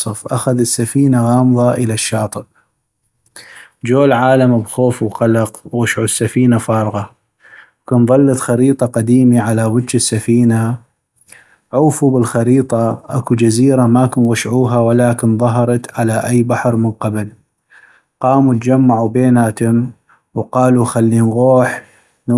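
Between 14.0 and 16.25 s the resampler restarted on every block. Each 250 ms block was converted on its own, in what sounds like a 48 kHz to 24 kHz conversion, so at every block edge the filter lacked the neighbouring samples and left a small error there. The result is a regular ticking at 4 Hz laid over the speech, present only while the signal runs and stopping when the fault ends.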